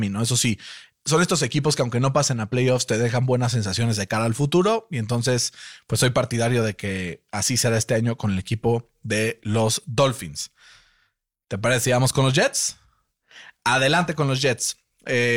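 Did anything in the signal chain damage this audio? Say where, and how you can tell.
No, nothing in the signal chain has damaged this speech recording. None of the stages between capture and playback leaves any audible trace of trouble.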